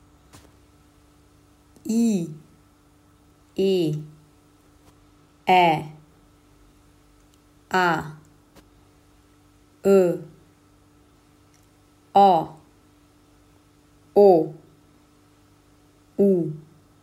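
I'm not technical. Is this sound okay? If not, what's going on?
Yes, nothing in this recording points to a technical problem in how the sound was captured, processed or delivered.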